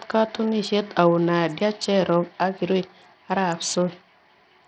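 From start to end, the speech carries heavy codec damage, likely from Bluetooth SBC compression at a low bit pool, which fits roughly 64 kbps. Starved upper sub-bands make the treble drop out and flicker, while coarse quantisation leaves gritty noise and aliasing on the voice.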